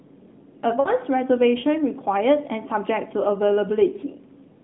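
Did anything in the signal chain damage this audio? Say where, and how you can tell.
Yes: lost AMR speech frames at 0.80 to 0.89 s, a radio-network fault. The decoder stretched and faded the last good frame, so the spectrogram shows smeared, decaying harmonics.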